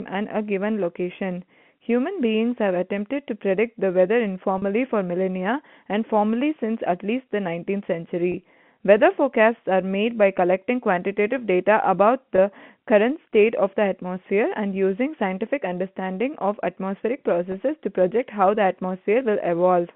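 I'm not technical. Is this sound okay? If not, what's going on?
No. At 4.58 to 4.62 s, and briefly at 8.32, 12.36 and 17.52 s, the speech catches for an instant on a slightly held, buzzy sound. This is packet loss with pitch repetition: small pieces of the call went missing, and the phone filled each gap by repeating the last bit of voice.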